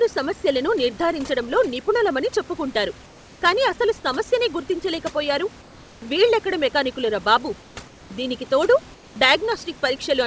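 Throughout the clip, there is overdone noise removal. The room noise in the gaps is pushed toward near silence with scattered twinkling specks, because individual frequency bands are switched down or off wherever they come close to the noise estimate, and the quieter parts of the speech disappear with them. On a spectrogram, the speech harmonics look ragged and broken, and the pauses show sparse isolated dots instead of an even grey floor. The spectrum ends at 8 kHz, as expected on this G.722 call path.

Four pauses have comfort noise in place of the background. This is likely because the sender stopped transmitting when its voice detector heard no speech, leaving the receiver to fill the gap with synthetic noise. The first runs from 3.06 to 3.42 s, between "సమస్యలను నిర్ధారించడంలో నిపుణులమని చెప్పుకుంటారు" and "కానీ అసలు సమస్యనే గుర్తించలేక". Two short ones follow at 7.62 to 7.76 s and 7.88 to 8.10 s, after "వీళ్ళెక్కడ మెకానిక్కులురా బాబు" and before "దీనికి తోడు". 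The last runs from 8.94 to 9.16 s. In each, the speckled background becomes a steady, featureless hiss about 2 to 3 dB quieter than before. On a spectrogram, these stretches appear as smooth, uniform blocks set against the specks around them. In the waveform, they form flat bands of even, low-level fill.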